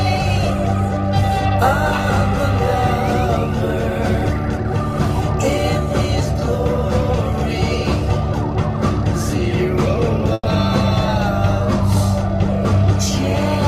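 At 10.33 s the last sound is briefly held and fades away, then drops to a short silence of about 20 ms before picking up again at 10.47 s, with a piece skipped. This is a burst of packet loss: roughly 120 ms of audio never arrived in time, so the receiver extended the last thing it had, attenuating it across the gap, then jumped ahead to the next packets that did arrive.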